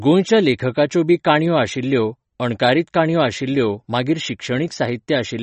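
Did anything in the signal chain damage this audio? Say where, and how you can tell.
Yes, at the codec stage, likely MP3 compression: the speech is watery throughout, and the spectrogram shows a hard ceiling at 8.3 kHz where the bit-starved encoder cut the treble, which fits a bitrate near 35 kbps.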